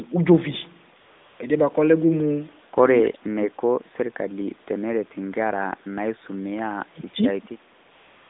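From 1.00 to 1.40 s, AMR comfort noise replaces the real background: no speech frames were sent, so a smooth, steady synthetic hiss fills the gap. From 3.02 to 3.59 s and 6.87 to 7.44 s, the speech dips by roughly 30 dB and breaks up, likely speech suppressed in double talk, with the echo canceller ducking the talker while the far side spoke. The same AMR comfort noise returns from 7.86 s to the end.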